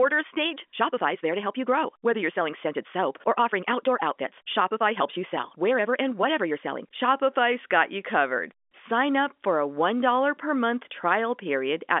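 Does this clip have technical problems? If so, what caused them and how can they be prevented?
Yes. From 0.0 to 7.08 s the speech runs at 1.6 times normal pace with unchanged pitch and sounds rushed. This is likely a time-stretched section, where software dropped short pieces to shorten it. To prevent it, fit material to length by editing rather than automatic time compression.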